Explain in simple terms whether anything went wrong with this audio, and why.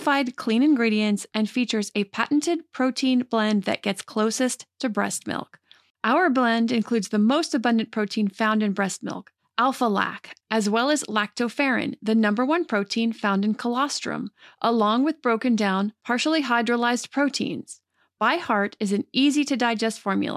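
Nothing went wrong here; the speech comes through steady and intact, with no moment where anything breaks, jumps or sounds off.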